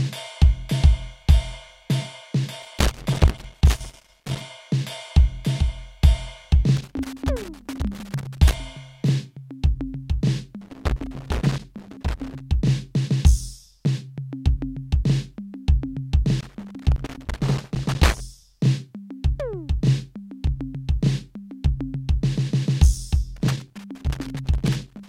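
Loose connector crackle breaks into the music five times, each burst lasting about 1.8 seconds: 2.62 to 4.42 s, 6.77 to 8.53 s, 10.61 to 12.40 s, 16.40 to 18.20 s, and 23.36 s through the end. A worn contact is intermittently making and breaking, chopping the signal into irregular scratchy crackle. On a waveform the music shows jagged gaps and spikes; a spectrogram shows scattered broadband vertical streaks across each burst.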